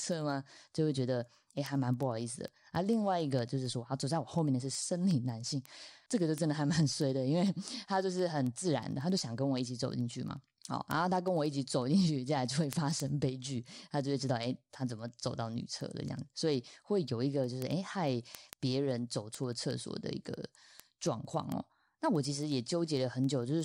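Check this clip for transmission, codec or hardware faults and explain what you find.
A clocking fault is present: word clock ticks throughout, from 0.12 s to 23.61 s. The receiving device runs on its own clock, unlocked from the sender's, roughly 200 ppm apart. As they drift past each other a single sample slips, giving sharp ticks of uneven strength about ten times a second under the speech.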